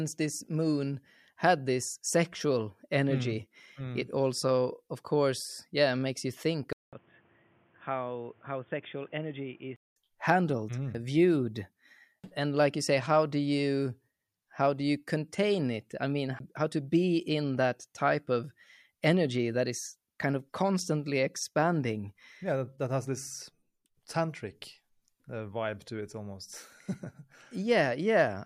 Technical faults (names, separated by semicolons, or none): input switched to a poorer device